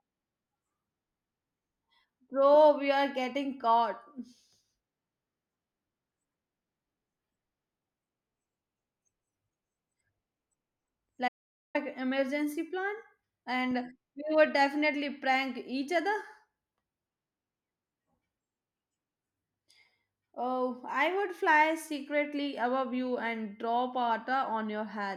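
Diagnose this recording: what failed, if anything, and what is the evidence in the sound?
The speech stops dead at 11.28 s and resumes at 11.75 s, just before "emergency plan". That is an audio dropout to silence, about 464 ms long. The gap is silent, with no room tone. The likely cause is a lost input or failed link while recording continued.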